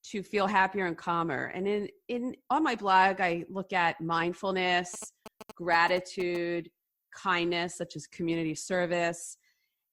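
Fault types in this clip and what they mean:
GSM signalling bursts: A 2G phone close to the recording chain was exchanging short signalling bursts with its network rather than carrying a call, and the audio circuitry rectified that radio energy into the signal. From 4.94 to 6.37 s this breaks into the speech as a galloping dit-dit-dit run of brief buzzes pulsing at about 217 Hz, sitting about 15 dB below the level of the speech.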